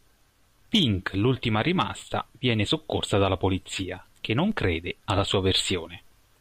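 The signal path suffers a DC step twice in this speech clip: the waveform's zero line jumps abruptly by about -32 dBFS at 2.12 s, just before "viene soccorsa dalla polizia", and again at 4.52 s, between "dalla polizia che non" and "crede alla". Each time the offset then drains away through a high-pass around 5 Hz, so the sudden shift is heard as a brief low thump while the speech carries on unchanged.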